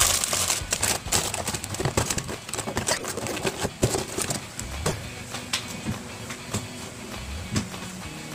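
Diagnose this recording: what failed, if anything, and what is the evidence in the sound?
The codec failed. Corrupt frames were decoded and played. Three short bursts of misplaced energy are heard as chirps or noise blips. The first is at 2.97 to 3.06 s, peaking around -20 dBFS. The second and loudest runs from 4.87 to 5.00 s, near -15 dBFS. The last, at 7.67 to 7.72 s, is a faint blip around -30 dBFS. Flipped bits in the compressed data made the decoder rebuild each damaged span, a few frames long, with wrong gains or codes.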